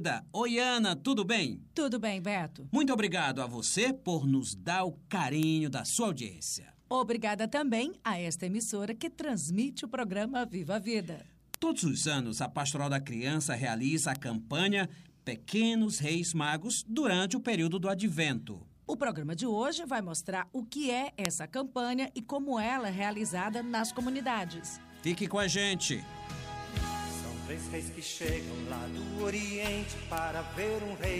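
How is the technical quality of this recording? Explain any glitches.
The recording has five bit error spikes, single sharp ticks at 5.43, 11.54, 14.15, 21.25 and 30.18 s. Each is a flipped bit in a stored or transmitted sample. The value leaps by a power of two for an instant and snaps back, so you get a broadband click with no relation to the surrounding audio. The ones at 11.54 and 21.25 s hit about -4 dBFS and stand out more, and the 21.25 s tick spans three consecutive samples. The others peak around -10 dBFS.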